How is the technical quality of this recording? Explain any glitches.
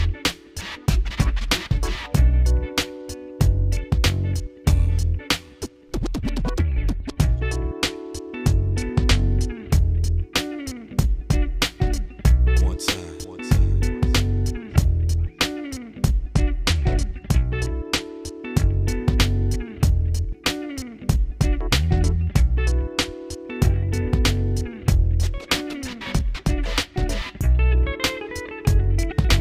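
The recording has three stretches of degraded quality from Bluetooth SBC bit pool drops, at 7.05 to 9.55 s, 16.17 to 18.81 s and 21.90 to 23.57 s. In each, the link's reduced bit allocation, consistent with a bit pool falling from 28 to 14 (about 108 kbps), starves the upper sub-bands, so the treble dulls and gritty quantisation noise appears until the rate recovers.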